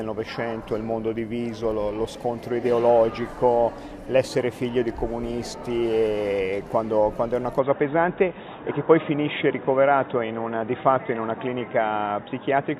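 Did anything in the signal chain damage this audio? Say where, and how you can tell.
Yes. From 7.59 s the sound turns boxy with nothing above 3.8 kHz and a faint new noise floor. With no gap or level jump, this is likely an input switched to a poorer device rather than a codec change.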